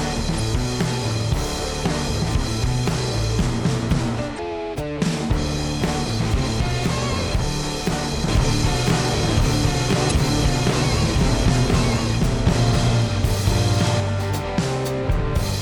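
Damaged data in the compressed stream makes the decoder lose sync and hunt for the next frame, causing brief glitches at 0.36–0.40 s, 4.35–4.40 s and 10.07–10.12 s. From 8.28 to 14.0 s there is a doubled audio track, likely from a second capture path or an out-of-step edit: an equally loud full-band copy trails about a second behind, starting and stopping abruptly.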